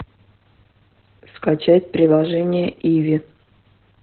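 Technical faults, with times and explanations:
Throughout: Opus voice compression, heavy. Nothing survives above 4.2 kHz, so a spectrogram shows a hard flat ceiling there. The speech sounds muffled, hoarse and slightly robotic because SILK codes its excitation coarsely in narrowband mode, which fits a bitrate near 8 kbps.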